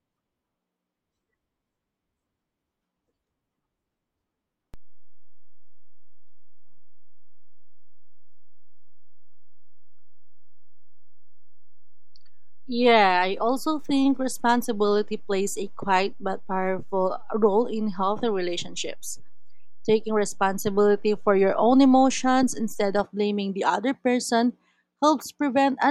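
Speech with a DC step: at 4.74 s, just before "blaming the other person", the waveform's zero line jumps by about -31 dBFS, giving a low thump. The offset holds until 23.0 s, then steps back with another thump. Each edge appears as a brief low-frequency burst on a spectrogram. The jump fits a converter recalibrating or an offset input being switched in.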